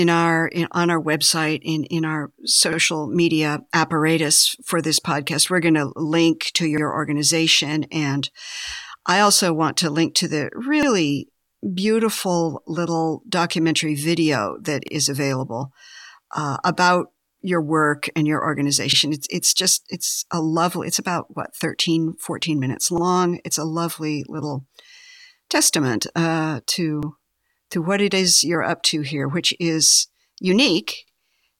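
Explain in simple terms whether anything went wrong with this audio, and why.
Overlapping chunks cause a short stutter roughly every 4 seconds, at 2.73, 6.78, 10.83, 14.88, 18.93, 22.98, 27.03 and 31.08 s. The speech was handled in 4-second pieces, each starting 50 ms early, so 50 ms plays twice, for example just after "to link to the" and "testament uh".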